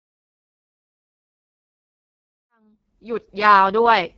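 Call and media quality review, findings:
AMR wideband (HD Voice) codec, whole clip: speech coded at a very low mode, which fits the 6.6 kbit/s rate, so the excitation model is too coarse. Result is heavy rough, raspy distortion, nothing above 7.1 kHz. Fade-in from about 2.5 s to 3.72 s is smooth.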